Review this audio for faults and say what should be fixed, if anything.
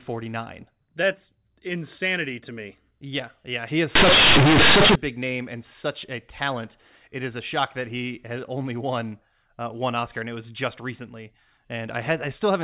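From 3.95 to 4.95 s the speech turns into harsh, very loud buzzing with heavy noise filling the gaps. This is companded audio read as linear: mu-law bytes played directly as 8-bit samples without expansion. Each sign change throws the output across about half its range, so quiet and loud parts reach similar levels. On a waveform that second appears as a dense, blocky slab. On a spectrogram it shows as broadband energy up to the 4 kHz limit of the surrounding G.711 telephone band. To prevent it, make sure every segment passes through the mu-law decoder before playback.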